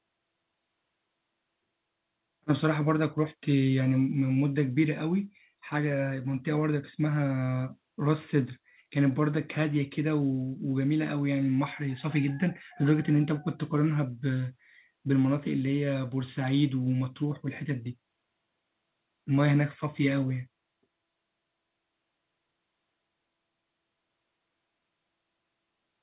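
Speech, with no technical faults to report.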